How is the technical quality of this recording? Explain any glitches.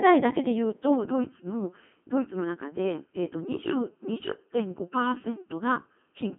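Quality is poor, with two faults stacked on the speech.

Throughout, the speech has passed through the Codec 2 vocoder. Instead of keeping the waveform, the encoder sends only pitch, voicing, energy and a rough spectral envelope, and the decoder rebuilds the voice from sine waves. The damage is heavy, and the thin, coarse result points to a very low-rate mode of around 2.4 kbit/s. The voice sounds robotic and buzzy, confined to roughly 250 Hz to 3.6 kHz, with nothing above 3.7 kHz.

From 0.95 s to the end, channel delay causes comb filtering. One channel arrives a fraction of a millisecond late, and when the two are mixed to mono, the shared signal cancels at evenly spaced frequencies, the first notch falling somewhere around 700 Hz. That fixed series of notches gives the already buzzy voice a hollow, phasey colour from that point onward.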